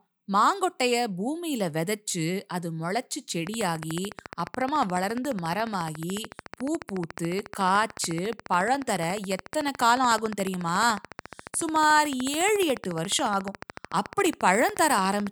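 Something in the chain is injecting a steady train of clicks into this speech recording, likely electrical interference from nearby equipment or a faulty connection or power supply. From 3.47 s to the end, sharp ticks arrive regularly at 14 per second, about 150 in all, peaking roughly 10 dB above the speech and audible through the pauses too.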